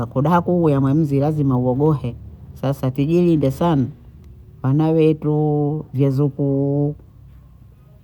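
No technical faults can be heard anywhere in this speech recording. Nothing in the audio calls for comment on technical grounds.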